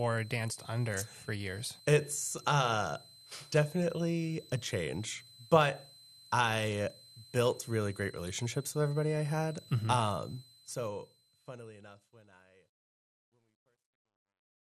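Throughout the speech runs a switching supply whistle near 4 kHz, drifting between 4.0 and 4.1 kHz about 25 dB below the voice. That wandering pitch sets it apart from a fixed test tone. Also throughout, the dull, gurgling, granular texture, with upper bands flickering away, is likely MP2 compression, fitting a starved rate around 80 kbps, unlike MP3's swirling pre-echo.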